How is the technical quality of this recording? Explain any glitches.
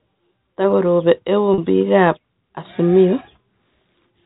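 There is one audible glitch, heard over a narrowband telephone channel that cuts off above 4 kHz.

At 1.54 to 1.58 s, just before "biik ab", there is packet loss with pitch repetition. About 40 ms of audio, which fits two lost 20 ms packets, was replaced by a repeated pitch cycle, heard as a brief held, buzzy tone.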